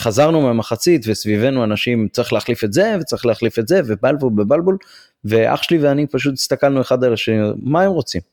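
No technical faults occur at any point in the recording.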